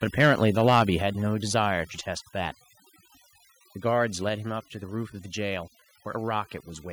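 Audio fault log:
Throughout: overdone noise removal. The background is pulled down, leaving twinkling specks where isolated frequency bands flicker on and off around the reduction threshold. Because the processing treats anything close to its noise estimate as noise, the quieter components of the speech are cut along with it.
0.2–0.82 s: microphone overload. The loudest syllables in this stretch carry a harsh, crackling edge, with peaks driven roughly 4 dB past the converter's limit and about 2% of samples flattened at the limit. The likely cause is an input level set too high for the converter, so the waveform tops are sheared off. That squaring of the peaks generates extra harmonics, which is the gritty distortion heard on the emphasised sounds.
1.02 s and 2.04 s: microphone volume stepped down. At each point the whole signal, voice and background together, drops abruptly in level: by about 4 dB at 1.02 s and by about 2 dB at 2.04 s. 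The first step follows shortly after the overloaded passage, consistent with call software likely reacting to the clipping by lowering the device input gain in discrete jumps rather than a smooth fade.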